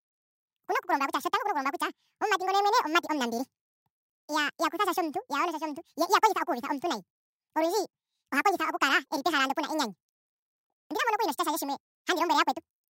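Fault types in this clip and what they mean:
Audio read two samples at a time (double speed): The reader treats each pair of samples as a single frame. The speech therefore plays twice as fast and sits a full octave, 12 semitones, higher throughout.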